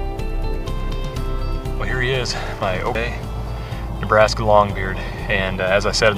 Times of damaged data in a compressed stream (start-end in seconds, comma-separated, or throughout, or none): 0.00, 2.95